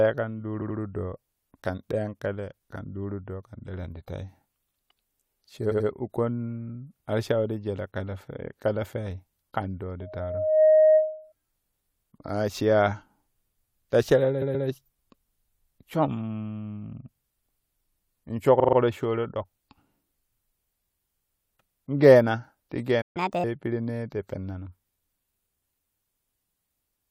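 Right at 0.61 s the speech stutters: a chunk of about 85 ms gets played twice more, so you hear the same sliver three times. That's repeated frames, where a run of compressed frames was sent again and the decoder just replays them. The same thing happens at 5.70 s.

From 10.01 to 11.33 s there's a loudspeaker feedback squeal. A mic is hearing the speaker it feeds, and the loop gain tops one at 623 Hz. That tone swells over under a second to about 10 dB above the speech.

Repeated frames come back at 14.41 s, this time a 128 ms block played twice more. At 18.59 s a short 42.7 ms block plays four extra times, which gives a quick rattling stutter.

At 23.01 s the audio drops out for about 136 ms in a playback stall, most likely because the player's buffer ran dry. It then resumes where it left off.

Right after, from 23.17 to 23.44 s, there's catch-up at higher speed. The player runs at 1.5 times speed to clear the backlog, so the speech jumps about a fifth higher in pitch and then settles back.

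The last repeated frames are at 26.16 s, a 128 ms block played one extra time.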